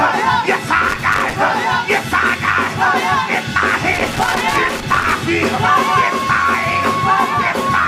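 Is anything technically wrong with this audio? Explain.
Yes. There's loose connector crackle, twice: from 0.89 to 1.33 s, then a longer burst from 3.93 to 5.12 s. A worn or dirty contact is making and breaking as it shifts, chopping the signal and popping on any DC, so you get irregular scratchy crackle bursts.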